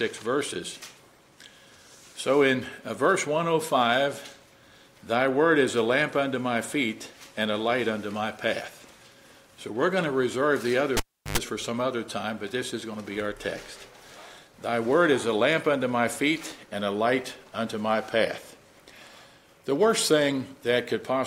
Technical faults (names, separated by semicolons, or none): cable pulled and plugged in